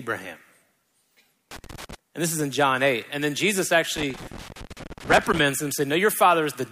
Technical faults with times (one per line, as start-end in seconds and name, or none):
1.51-1.95 loose connector crackle
3.97-5.39 loose connector crackle